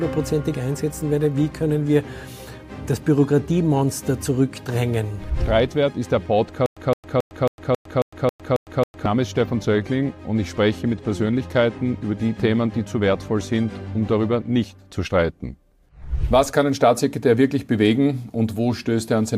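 A stutter with silent gaps runs from 6.66 to 9.06 s: a 165 ms burst of sound repeats nine times, each followed by about 106 ms of digital silence, every 272 ms. The likely cause is a stalled stream replaying its last fragment at each retry, losing the intervening audio.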